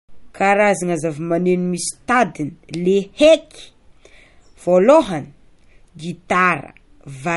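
Speech runs through the whole clip with plainly audible MP3 compression. The s sounds have a watery, swirly edge. The likely cause is an encoder starving for bits, which fits a 48 kbps stream, cutting high frequencies and dropping weak detail.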